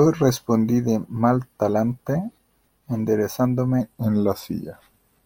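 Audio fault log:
3.81–5.26 s, wrong sample rate: the speech slows to about 0.92 times its speed and drops roughly 1.5 semitones in pitch. Tempo and pitch fall together with no conversion, which fits 48 kHz material played back at 44.1 kHz.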